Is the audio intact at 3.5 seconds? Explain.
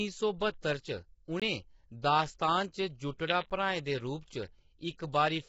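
No. At 3.50 s there is a block of digital silence about 10 ms long: the signal drops straight to silence and returns with no fade, so the gap is heard as a tick or dip. Unlike a fade-out dropout or concealed packet loss, the gap is plain silence with hard edges.

The speech at that moment also carries heavy damage that is likely from low-delay AAC compression (AAC-ELD) at a rate around 16 kbps. The voice sounds rough and grainy, with noise filling the gaps between harmonics and nothing above 7.7 kHz. Plain band-limiting would only dull the sound without adding that grain.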